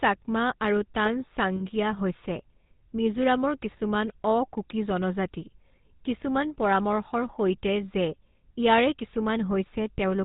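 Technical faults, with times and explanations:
Throughout, GSM full-rate codec: plainly audible buzzy, gravelly roughness and nothing above 4 kHz, because the coder models the vocal tract and drives it with coarse pulse excitation, consistent with the 13 kbps full-rate coder.
1.56–1.63 s and 9.92–9.99 s, lost GSM frames: brief rough, metallic ringing where missing frames were filled by repeating the last good one. The 40 and 60 ms gaps fit two and three 20 ms frames.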